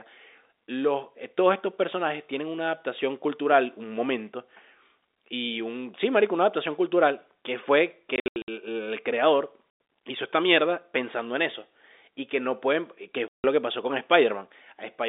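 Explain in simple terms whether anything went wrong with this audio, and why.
Something did go wrong: packet loss filled with silence. The speech drops out in short, dead-quiet holes, three times: a broken stretch from 8.16 to 8.48 s where pieces vanish on and off (the longest gap is 80 ms), a 100 ms hole at 9.7 to 9.8 s, and a 160 ms hole at 13.28 to 13.44 s. The gap sizes fit lost 20 ms packets. Unlike a fault where the receiver repeats or smears sound to cover gaps, these holes are pure silence, and the narrow telephone sound around them stays steady.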